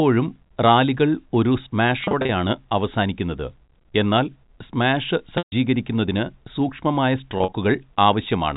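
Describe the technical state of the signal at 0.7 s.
At 0.7 s the speech is intact, carried through G.711 telephone coding that keeps it within the 4 kHz telephone band.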